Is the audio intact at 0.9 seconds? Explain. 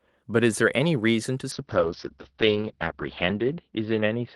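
Yes, at 0.9 seconds the speech plays through cleanly, with no dropout, click, distortion or other fault at that point.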